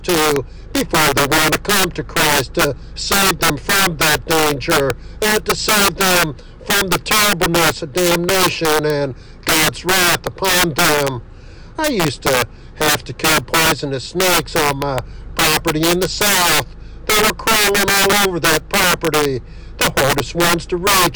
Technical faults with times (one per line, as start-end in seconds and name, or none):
0.00-21.16 integer overflow